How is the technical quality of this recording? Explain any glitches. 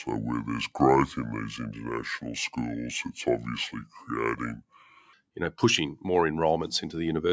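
The recording has two clear faults: a long stretch played too slowly, then a gradual rise in level near the end. The band tops out at 8 kHz, consistent with call microphone processing.

From 0.0 to 5.13 s the opening is a section at the wrong speed, running at about 0.69 times its recorded rate. Because speed and pitch move together here, the speech sounds dragged out and lowered by roughly seven semitones, deep and sluggish. The likely cause is playback or editing against a mismatched clock, which stretches the samples across more time than they originally occupied.

From 5.37 to 7.28 s there is automatic gain rising. The gain control judged the input too quiet and raised its gain by about 4 dB over nearly two seconds. Speech and background noise swell together rather than the speech alone getting louder, which marks this as a level adjustment applied to the whole signal rather than a change in how the talker is speaking.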